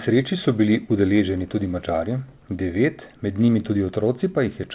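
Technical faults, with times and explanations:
3.46 to 3.50 s, short concealed packet loss: 20 ms never arrived in time, so the receiver stretched the preceding sound over the gap, leaving a quick smear.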